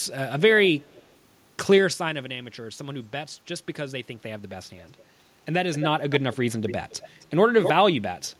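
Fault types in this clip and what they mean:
Echo leak: A delayed copy of the speech returns about a quarter second later, likely from a speakerphone whose echo canceller let sound through.
Zipper noise: From 4.78 to 6.32 s, the level moves about 10 dB in 3 dB steps, roughly three per second, each step clicking audibly.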